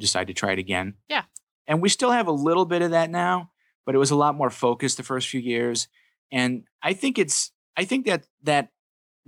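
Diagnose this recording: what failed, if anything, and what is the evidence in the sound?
Nothing failed here: listening across the whole of the speech, there's no sign of trouble at any stage of the chain, so there's really nothing to diagnose.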